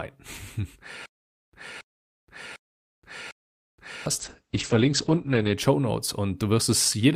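From 1.06 to 4.06 s the speech stutters with silent gaps: a 0.28 s fragment plays four times, each followed by about 0.47 s of dead silence, at a steady 0.75 s rhythm. The player likely stalled and replayed its last buffer on every retry, and the real audio from that stretch is lost.

At 4.21 s the sound turns rough and muffled until 5.63 s, a call bitrate drop. The encoder's rate fell from 48 to 9 kbps and stayed at its lowest for 1.32 s, coding coarsely and cutting the bandwidth from 20 kHz to 8 kHz.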